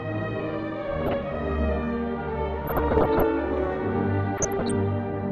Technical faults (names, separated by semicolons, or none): DAB burbling